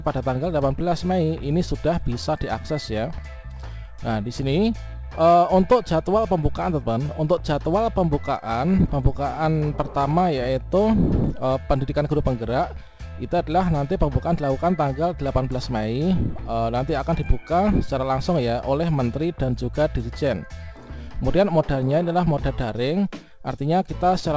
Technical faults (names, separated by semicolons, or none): none